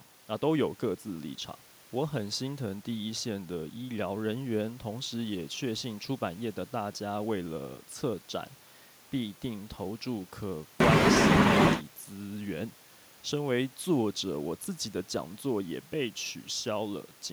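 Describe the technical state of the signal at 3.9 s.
At 3.9 s the speech signal is intact, with no audible technical fault at that moment.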